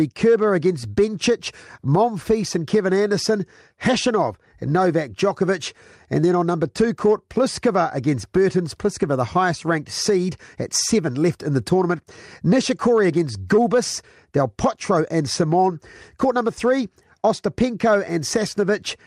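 A speech recording with no audible technical fault. There is nothing to place in time or trace to a cause anywhere in it.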